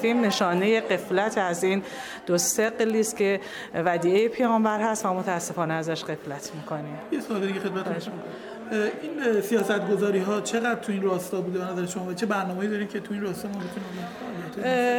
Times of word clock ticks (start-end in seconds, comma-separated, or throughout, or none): 0.32-14.74